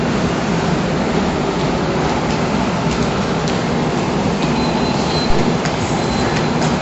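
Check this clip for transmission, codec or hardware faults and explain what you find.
One fault runs through the whole recording, most likely heavy MP3 compression. Starved of bits, the encoder has cut the treble sharply, leaving nothing above about 7.9 kHz, which fits a low bitrate around 48 kbps. It has also discarded weak frequency lines, letting them drop in and out from frame to frame. The result is plainly audible: the sound is dull and muffled at the top, with a watery, swirling texture and smeared attacks.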